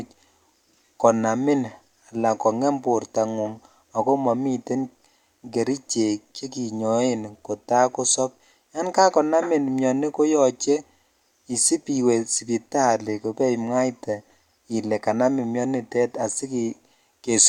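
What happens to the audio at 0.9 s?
Nothing goes wrong at 0.9 s; the speech carries on intact through that moment.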